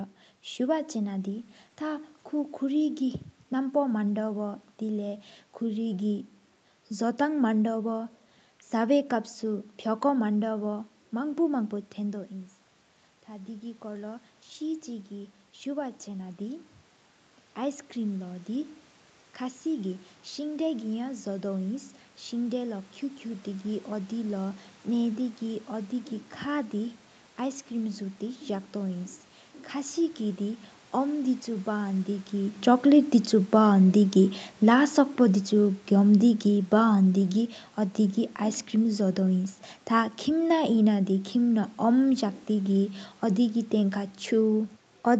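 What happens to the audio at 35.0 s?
The speech and its room background sink together, steadily rather than abruptly, from 34.15 s to about 45.2 s. This is automatic gain falling: the gain control judged the input too loud, or its background noise too strong, and is gradually lowering its gain across that span.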